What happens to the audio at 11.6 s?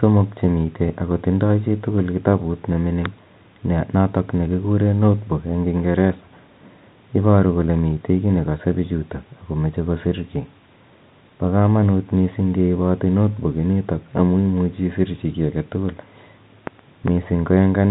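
Nothing goes wrong at 11.6 s: the speech carries on intact through that moment, with only the narrow telephone bandwidth of the G.711 coding it passes through.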